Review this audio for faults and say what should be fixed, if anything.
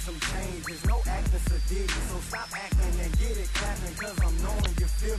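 Damaged data in a compressed stream at 4.62 to 4.67 s: corrupt frames knock the decoder out of sync, producing a brief glitch as it searches for the next frame. Prevent it by checksumming the stream and re-fetching or retransmitting any segment that fails verification.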